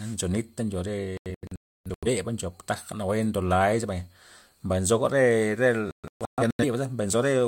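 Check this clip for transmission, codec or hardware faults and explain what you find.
The speech is interrupted twice by a digital broadcast dropout. From 1.17 to 2.08 s, after "ncho re", the sound mutes in several holes totalling about 0.6 s, the longest about 0.3 s, until it returns at "ncho taja nawue ndo". From 5.91 to 6.65 s, after "mbay nzoga re re", holes totalling about 0.47 s follow, the longest 0.13 s. Each time the receiver lost the signal or rejected corrupted frames and muted until clean ones arrived, so the audio sent meanwhile is gone. A waveform shows flat gaps, and a spectrogram shows blank vertical bands.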